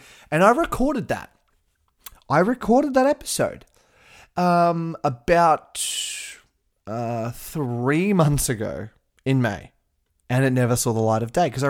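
No technical faults can be heard anywhere in the recording.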